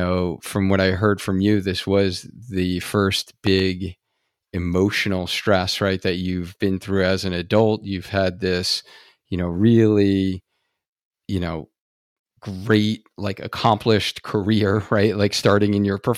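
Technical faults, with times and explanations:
3.47 to 3.62 s, loud pop: two sharp pops land a few dB above the speech while it carries on underneath, likely a brief voltage spike from a plug or switch.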